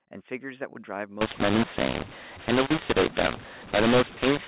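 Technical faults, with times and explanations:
1.21 to 4.47 s, mu-law and A-law mixed up: mu-law telephone samples are decoded as A-law, scrambling levels, so speech turns harsh and distorted and pauses fill with noise.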